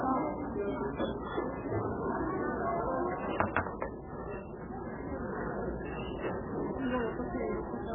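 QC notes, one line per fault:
Throughout, MP3 compression: Nothing is heard above 3.5 kHz, and the sound is heavily watery and swirly, with smeared attacks. The likely cause is an MP3 encoder starved of bits, which fits roughly 8 kbps, cutting the treble and flickering weak frequency lines frame to frame.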